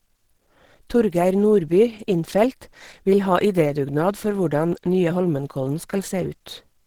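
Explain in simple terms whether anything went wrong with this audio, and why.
Throughout the speech, the sound is hoarse, grainy and muffled, likely from Opus compression. It roughens rather than swirls, unlike MP3 damage, and the high frequencies aren't cut off.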